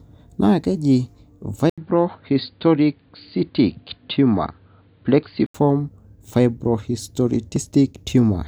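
Input switched to a poorer device, from 1.70 s to 5.54 s, in this speech recording: after an 80 ms gap the sound turns dull, with faint new background noise and no obvious level jump, likely because capture moved to a narrower-band microphone or headset profile. Dropped buffer (overrun) at 7.56 s: a small jump forward in the sound, likely because a few milliseconds of samples were overwritten before being read, leaving the two sides spliced directly.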